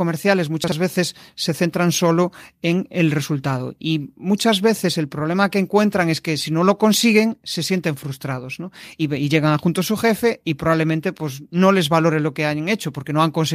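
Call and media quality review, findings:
Chunks out of order, 0.64–0.72 s, just before "veces se centran solo": one 40 ms chunk played a chunk late. Jumbled moment, three hard joins; likely jitter buffer or write path.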